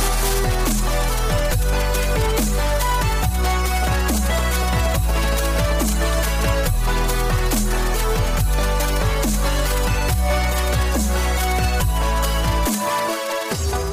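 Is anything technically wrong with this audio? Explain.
Yes. From about 6.39 to 9.29 s there's GSM phone buzz, a hard, raspy 217 Hz rasp full of harmonics, sitting about 24 dB under the sound and nearly steady. A nearby 2G phone on a call is bursting 217 times a second, and the audio circuitry rectifies those radio pulses.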